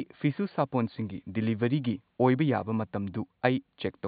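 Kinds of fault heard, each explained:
Nothing here points to a system fault; the only thing in the background is the room's own quiet noise, sitting about 50 dB under the speech.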